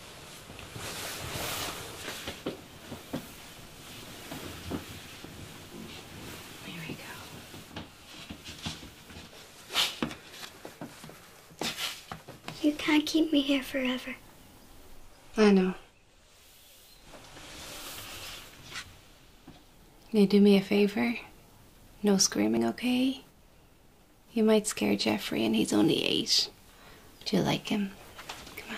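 At 3.02 s, and again at 5.25, 7.71, 10.45, 22.57 and 27.21 s, the sound jumps abruptly forward. Each jump likely comes from a dropped buffer (overrun), where samples were overwritten before being read and the surrounding audio was joined directly. The first skips roughly a tenth of a second and the others roughly 50 ms. On a waveform each shows a sharp discontinuity with no gap, and on a spectrogram a thin vertical broadband line.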